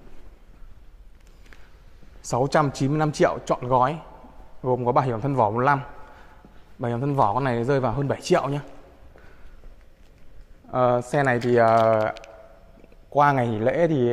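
Nothing in this audio stood out as a technical problem on listening.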